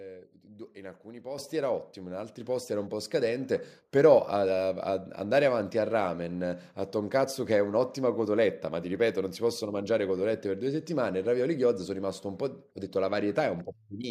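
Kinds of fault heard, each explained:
Microphone volume stepped up: the input gain of the microphone is raised in one abrupt step, so the speech and the background noise get louder together rather than fading up. It happens twice here, by about 8 dB at 1.38 s and by about another 4 dB at 2.4 s. On a waveform the envelope widens suddenly at each point. On a spectrogram every band, including the quiet noise floor, brightens at the same instant.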